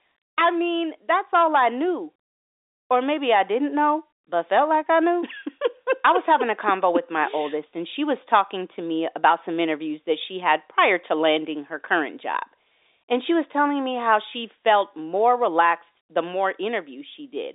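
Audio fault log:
Nothing stood out on listening; the speech comes through at telephone bandwidth, with nothing heard above about 3.8 kHz.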